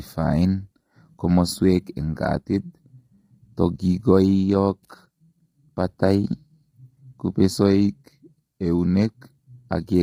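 From start to finish the speech has likely passed through low-delay AAC compression of the AAC-ELD kind used for video calls, squeezed hard enough to fit a bitrate of around 24 kbps. At this low rate its frames leave few bits to spare, so the damage is heavy: the voice sounds rough and grainy, hiss fills the gaps between harmonics, and the top band comes across dulled or artificial.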